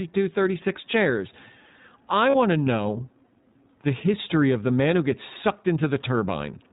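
From start to finish the speech sounds band-limited and slightly rough and synthetic, with nothing above 4 kHz and plainly audible coding damage. This is the iLBC codec, which codes each frame's excitation independently. The character fits iLBC's 15.2 kbps mode with 20 ms frames.

From 2.30 to 2.36 s, just before "to know", the sound turns into a brief held, faintly buzzy vowel-like tone, then snaps back to normal. These are lost iLBC frames. The decoder repeated the last pitch cycle mixed with noise to fill the gap, which fits two missing 20 ms frames.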